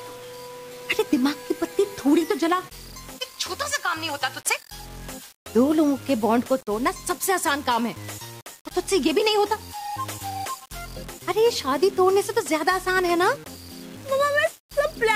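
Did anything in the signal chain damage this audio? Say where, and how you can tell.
Yes. Throughout the clip, a gritty, grainy distortion tracks the sound and thickens as it gets quieter, sitting only about 25 dB below the signal. This is low bit depth without dither, likely from a sample-format conversion that rounded to about 6 bits. Unlike steady dither hiss, this error disappears in silence.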